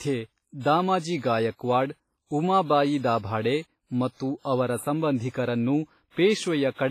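Throughout the speech there is heavy damage from what is likely WMA compression: a washy, ringing quality with hiss that swells and fades along with the signal. The damage fits a low bitrate of around 24 kbps, and nothing is present above 15.5 kHz. Long transform blocks smear quantisation noise over tens of milliseconds and zero out weak components. This sets it apart from tape hiss or broadband noise, which stays steady regardless of the signal.

From 4.42 to 4.45 s, a sharp attack is preceded by about 30 ms of pre-echo, a short hiss that arrives just before the onset and softens its edge. The attack fell late in a transform block. The noise sized for the loud part was spread across the whole block, so it filled the quiet moment ahead of the onset. Unlike reverb or an ordinary echo, which trail after a sound, this smear comes before it.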